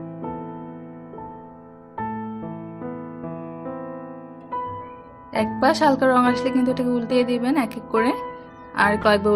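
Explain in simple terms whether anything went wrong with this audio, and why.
Two things went wrong. From 5.42 to 7.42 s there is Wi-Fi interference. A nearby Wi-Fi radio leaked into the audio circuitry, which turned its regular signal pulses into sound. You hear a faint, steady ticking about ten times a second, because the radio announces itself every 102.4 ms. Unlike random crackle or a loose-cable click, the ticks keep an even, machine-like beat and stop when the interference stops.

Near the very end, from 9.01 to 9.04 s, a corrupt frame was decoded. The compressed data for a brief slice of audio got damaged, and the player played it anyway, sending sound to the wrong pitches. It fits a few damaged frames in a row. The result is a short, fairly loud glitch. A dropout would be a gap of silence, and a click would be a single tick, but this is a brief burst of garbled sound.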